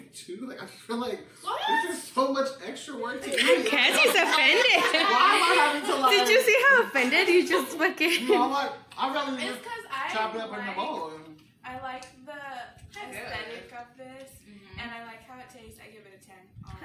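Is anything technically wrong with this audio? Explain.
No, nothing technically wrong can be heard in this audio. The signal shows no technical problem that needs attention.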